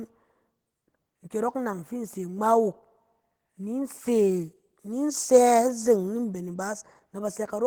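From start to finish the speech carries Opus voice compression damage, and it's plainly audible: a hoarse, slightly robotic grain from coarse excitation coding. The band still reaches about 20.2 kHz, so it sounds like hybrid mode at a low rate, roughly 16 kbps.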